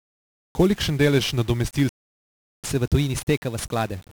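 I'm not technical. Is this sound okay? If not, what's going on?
No. The speech is heavily damaged by 1-bit DFPWM compression from start to finish. This format stores only one on-or-off step per sample, nudging the signal up or down and never describing it precisely. The rounding errors that leave are severe here, so the whole recording sounds fuzzy and crackly, with a constant hiss sitting over the upper frequencies and swallowing the crisp detail in consonants.

There is also a playback stall. Right after "delež nadomestil", at 1.89 s, the sound cuts out completely and stays silent until 2.64 s, a gap of about 0.75 s. It then picks up again. The likely cause is that the player ran short of incoming data, or was held up internally, and could not produce output until it caught up.

After the gap comes catch-up at higher speed. From 2.64 s to the end, the player races through its backlog to recover the lost time, running about 1.1 times normal speed. 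Because it does this by simply playing faster, the pitch rises as well, by roughly one and a half semitones. The speech sounds slightly hurried and a little higher for that final stretch.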